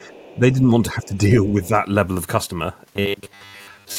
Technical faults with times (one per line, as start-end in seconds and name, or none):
0.00-0.38 other side's voice leaking through
0.34-1.74 speech suppressed in double talk
1.03-1.17 other side's voice leaking through
2.96-3.99 robotic sound from repeated short buffers